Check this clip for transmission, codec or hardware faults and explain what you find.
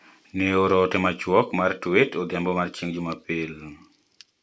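No transmission, codec or hardware faults turned up here.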